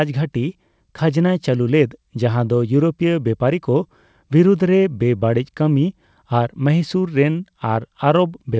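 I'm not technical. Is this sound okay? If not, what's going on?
Yes, the sound is fine; it went through an ordinary internet call connection, which trims away the very highest sounds above about 8 kHz, the way calls normally do.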